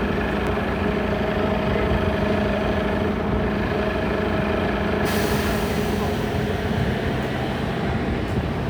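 No technical faults can be heard anywhere in this audio.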